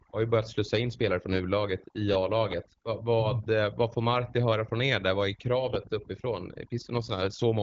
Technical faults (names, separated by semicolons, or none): overdone noise removal